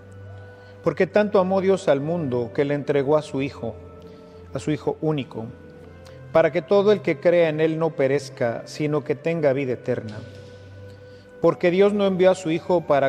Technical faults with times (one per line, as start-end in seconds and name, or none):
none